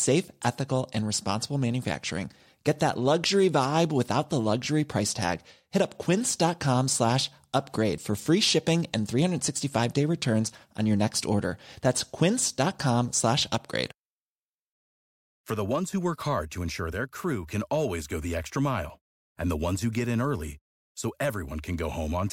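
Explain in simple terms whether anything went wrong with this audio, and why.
At 7.98 seconds, just before "for free shipping and", the recording system most likely fell behind for a moment. It didn't collect one batch of sound in time, so the hardware wrote new sound over it. This is a dropped buffer (overrun). Roughly a fiftieth of a second of speech is simply gone, and the audio on either side is stitched straight together. You hear a jump in the speech, with no gap of silence.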